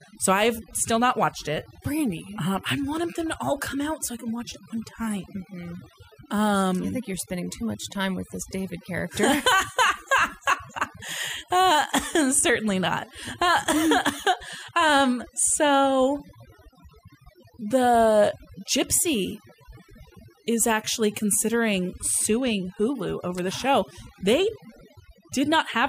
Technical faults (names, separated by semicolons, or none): overdone noise removal